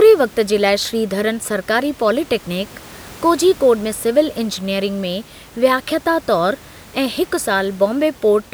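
The speech carries no technical faults, with only the recording room's own background noise audible at about 24 dB below the voice.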